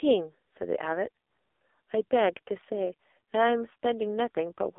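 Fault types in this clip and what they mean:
AMR narrowband mobile codec: speech held within 300 Hz to 3.6 kHz and made heavily buzzy and synthetic, fitting a bitrate near 5 kbps; a plain telephone filter adds no buzz.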